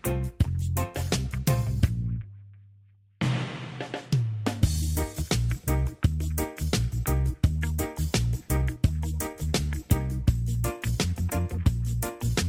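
Running through the whole thing there's clock drift between sender and receiver: the sender's clock is about 4 percent fast, so the receiver's jitter buffer keeps overfilling and has to shed material to stay in step. That shows up as repeated timing corrections from 0.30 s to 12.44 s. The receiver keeps trimming short slices to cope with the 104 percent speed, always in the same direction but at uneven gaps, so the audio has small hiccups.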